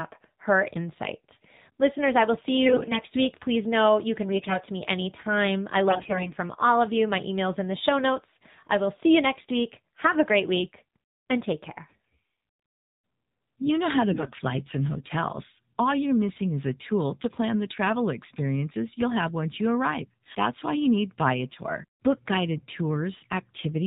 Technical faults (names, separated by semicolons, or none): AMR narrowband mobile codec; AMR bit errors